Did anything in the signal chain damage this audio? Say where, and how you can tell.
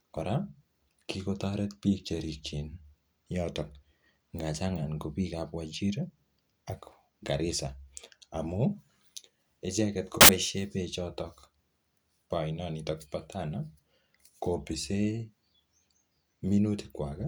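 Yes. The damage sits at the sample-format conversion stage. From 10.21 to 10.29 s the speech gives way to a burst of loud, harsh broadband noise, about 80 ms long. This is samples built from the wrong bytes. The reader has joined each sample's bytes incorrectly, through a byte offset, swapped byte order or a mismatched alignment. The rapidly changing low bits end up as the most significant part of every value. The result is broadband hiss at high level instead of the speech.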